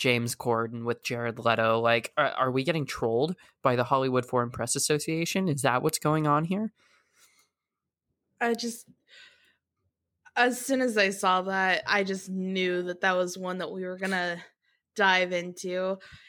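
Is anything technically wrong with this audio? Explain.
No, nothing technically wrong stands out here; the speech comes through steadily with nothing that sounds broken or out of place.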